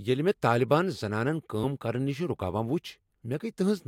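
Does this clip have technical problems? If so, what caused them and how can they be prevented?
Yes: skips at 1.63 s, just after "طالبان زنانن", and at 3.21 s, where the speech jumps ahead roughly 70 ms and 150 ms. These are compressed frames skipped, with whole frames lost or rejected as damaged. Preventing it means storing and transmitting the compressed file with error checking so no frames go missing or get corrupted.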